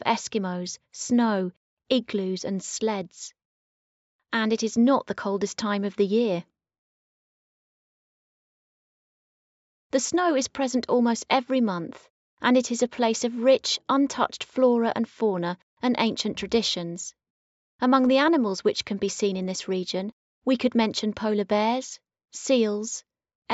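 No technical faults can be heard anywhere in the audio.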